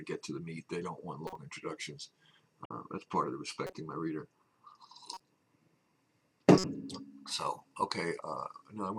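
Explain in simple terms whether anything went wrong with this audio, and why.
Something did go wrong: five short glitches from a corrupt frame decoded, at 1.27 to 1.36, 2.65 to 2.71, 3.67 to 3.73, 5.14 to 5.20 and 6.58 to 6.64 seconds. Each one lasts only a few hundredths of a second. Some data inside the compressed audio got scrambled, but the player decoded those bits anyway. For the length of the damaged chunk, sound lands at the wrong pitches, so you get a stray chirp, squeak, blip or noise burst.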